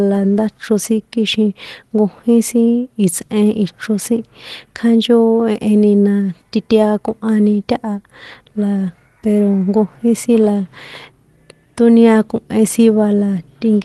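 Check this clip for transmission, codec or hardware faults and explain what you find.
Nothing here stands out as a fault. The speech sounds like it went over an ordinary call link, with the top end rolling off around 12 kHz in a way that fits an Opus stream at about 20 kbps, which is just how that path normally sounds.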